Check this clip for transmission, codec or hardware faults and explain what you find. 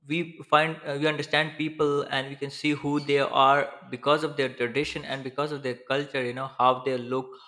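No transmission, codec or hardware faults turn up in this clip.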